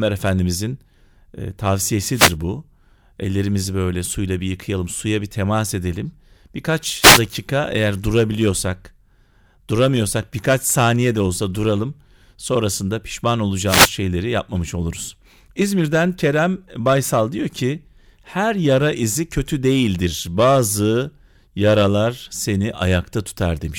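Speech with three wireless microphone noise hits. Short bursts of static cut in at 2.12–2.35 s, 7.00–7.21 s just before "eğer durabiliyorsak", and 13.66–13.91 s just before "yapmamış oluruz". Each marks a brief radio fade, where cancelling reflections let receiver noise rise.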